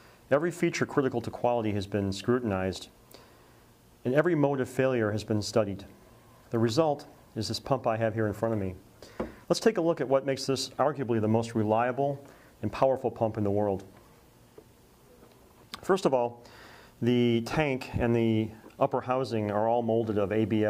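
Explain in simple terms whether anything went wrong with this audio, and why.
Nothing went wrong with this audio; there is no problem to explain.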